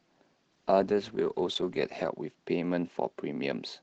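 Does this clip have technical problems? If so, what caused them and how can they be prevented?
Yes. A call bitrate drop hits from 0.52 s to 2.21 s: the bandwidth estimate fell, starving the Opus encoder, with the sound suggesting a slide from 32 to about 13 kbps held for 1.55 s. The speech turns rough and watery, losing its upper detail, before recovering. Giving the call more stable network headroom, or setting a higher minimum bitrate, prevents this.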